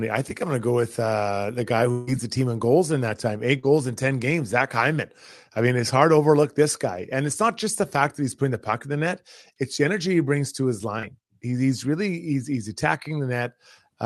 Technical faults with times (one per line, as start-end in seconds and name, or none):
1.91-2.10 long network dropout
3.59-3.66 short concealed packet loss
10.99-11.06 short concealed packet loss